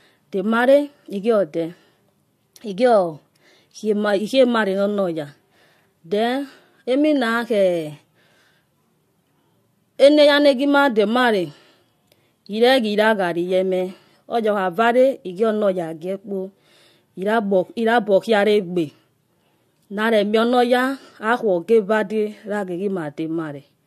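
No technical faults detected.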